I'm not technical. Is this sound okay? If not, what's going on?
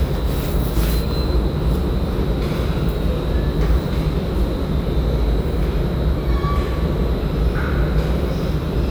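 Yes, this one's fine: there's nothing wrong to hear anywhere in it, so you can relax.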